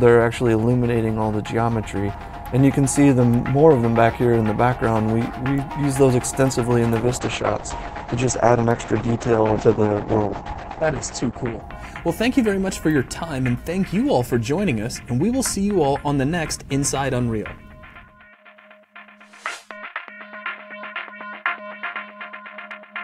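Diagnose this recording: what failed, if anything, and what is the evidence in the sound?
A call bitrate drop runs from 7.0 to 11.69 s, at the network and codec stage. The bandwidth estimate collapsed and the encoder fell from 96 kbps to 9 kbps for about 4.6 s. It coded coarsely and narrowed the audio band from 20 kHz to 8 kHz, so the sound turns muffled and rough.

CD scratch ticks occur between 8.71 and 9.12 s, during playback from disc. Three brief ticks, the longest about a millisecond, recur at the disc's rotation rate. A scratch corrupted more data than error correction could repair, and the player concealed the damaged samples.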